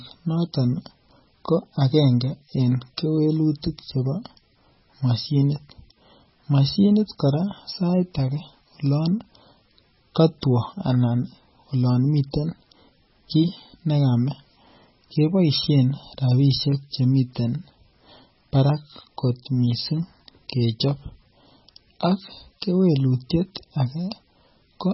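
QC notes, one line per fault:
Throughout, MP3 compression: likely a heavily starved encoder, around 16 kbps, discarding weak spectral lines, leaving speech watery and swirling, with nothing above 5.6 kHz.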